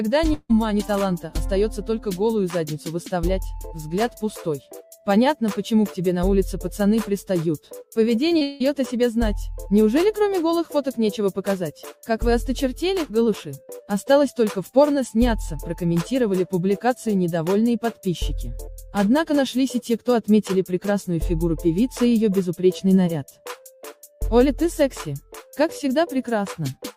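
The audio has two long network dropouts and two short concealed packet losses. From 0.33 to 0.51 s, about 160 ms of audio never plays. The last sound is stretched into a fading buzz or hiss that ends in about 30 ms of silence before the audio resumes further on. From 8.43 to 8.62 s, a similar gap of about 180 ms is filled almost entirely by that decaying continuation, with no silent stretch. Both points to a network outage that likely stopped packets arriving for well over a tenth of a second. What separates these from the short losses is their length: the fill lasts long enough to audibly fade, and the material simply isn't there when sound returns. The short concealed packet losses sit just before the second dropout, at 8.29 to 8.33 s and 8.39 to 8.43 s, each about 20 ms missing. The decoder bridged each hole by extending the preceding sound, then blended back into the real signal. They come across only as a brief smear or wobble rather than a fading tail, because the patch is too short to decay before the real audio resumes.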